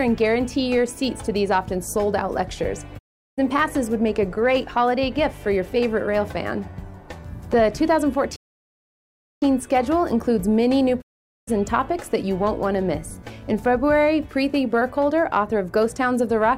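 At 2.97 s the receiver loses the digital broadcast signal or rejects corrupted frames, so it mutes. That is a digital broadcast dropout. The sound fades to silence over about 20 ms and stays gone until 3.40 s. The missing stretch, about 384 ms, fits roughly a dozen lost frames. Whatever was transmitted in that gap never arrives. At 11.00 s the same dropout recurs with the same quick 20 ms fade, and the audio returns at 11.49 s after about 448 ms of lost material.

Between these, from 8.36 to 9.42 s, the player most likely ran short of data or had its output thread blocked. This playback stall leaves the output silent for about 1.06 s. The sound halts abruptly in mid-flow and then resumes once playback recovers.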